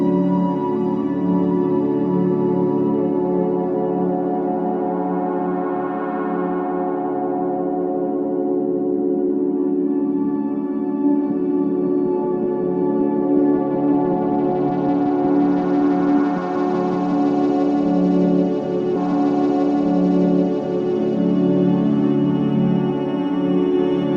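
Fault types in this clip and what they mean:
Stream segment repeated: at 18.95 s the audio jumps back and plays the same two-second stretch again, ending at 20.95 s, with a small blip at the jump. The player fetched or queued one segment twice, adding 2 s to the programme.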